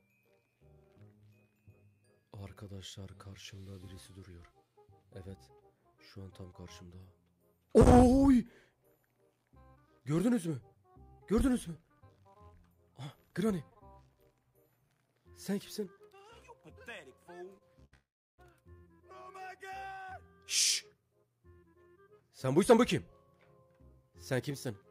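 At 17.58 to 17.63 s comes a short stall from a late packet. The jitter buffer ran dry. The last sound is held for 29 ms, then resumes where it left off. A second stall follows at 17.85 to 17.94 s, holding for 73 ms. Each leaves a brief smeared hold with a faint buzz or dip.

From 17.94 to 18.40 s the audio freezes. The held sound fades out, and 320 ms of that gap is silent. It then picks up where it stopped, 439 ms later than before. This is likely a call audio freeze, with packets held up on the way.

From 20.87 to 22.73 s comes a jitter buffer speed-up. Too much audio had piled up. The receiver trimmed tiny pitch-period slices again and again. Playback runs at 110% speed, dropping about a fifth of a second, and sounds hurried but keeps its pitch. A milder one, at 106%, runs from 24.03 to 24.70 s and removes about 50 ms.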